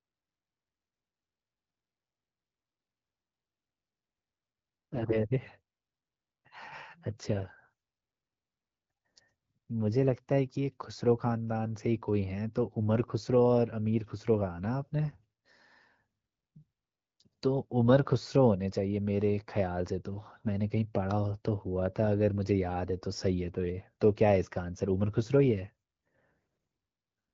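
From 4.94 to 5.26 s the speech turns hoarse and gargly. These are AMR bit errors: some unprotected bits in the frames arrived flipped, roughly 3 percent. Excitation pulses and fine gain and spectral values went wrong. Pitch and level hold roughly steady.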